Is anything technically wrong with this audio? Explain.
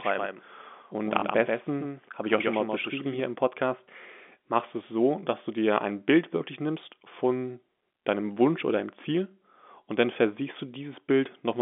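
Yes, there are two faults in this speech clip, heard over a telephone-band path of roughly 200 Hz to 3.5 kHz with G.711 coding.

Doubled audio track, 0.0 to 3.2 s: a second copy of the same speech is already running when the clip begins, trailing the original by roughly 150 ms and sitting about 5 dB lower. The likely cause is the audio being picked up again through a slower path or an edit leaving two copies misaligned. The copy is full-band with no decay or room colour, so it sounds like a clean slapback echo rather than reverberation, and it cuts off abruptly at 3.2 s.

Packet loss with last packet repeated, at 1.2 s: one 20 ms packet went missing, and the receiver filled the gap by playing the previous packet again. A single repeat like this is heard as a brief blip or tiny hiccup rather than a sustained robotic stutter.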